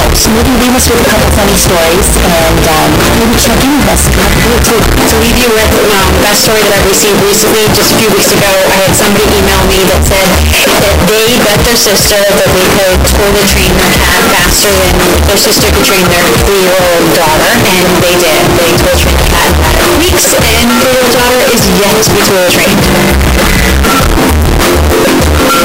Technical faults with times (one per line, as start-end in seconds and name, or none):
0.00-25.65 float read as integer